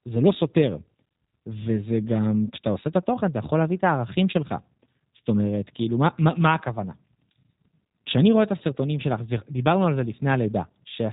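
From start to finish the speech sounds slightly rough and synthetic, with a buzzy, processed edge and nothing above about 3.8 kHz. The damage is plainly audible, the hallmark of the G.729 codec, here in its G.729A form. The speech is rebuilt from a vocal tract filter, a pitch predictor and a handful of pulses in each 5 ms half-frame, at a rate that fits 8 kbit/s. Anything the model can't capture is lost, and the band above the cut-off never passes.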